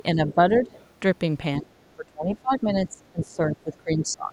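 At 0.31 to 0.35 s, the other side's voice leaks through. It is faint, about 25 dB below the talker. The likely cause is an echo canceller leaving some of the loudspeaker playback in the microphone signal.

From 0.35 to 0.71 s, the speech is suppressed in double talk. The talker dips by up to about 10 dB for around a fifth of a second. It likely happens because the canceller cannot separate the talker from the echo, so it turns both down.

At 0.65 to 0.84 s, the other side's voice leaks through again. It sits about 30 dB down. It likely comes from the same residual echo.

From 1.61 to 1.72 s, the speech drops sharply, by about 25 dB. This is likely the same double-talk suppression.

From 1.96 to 4.32 s, the suppression returns. It takes out around two seconds, with dips of about 25 dB. This is likely the same double-talk suppression.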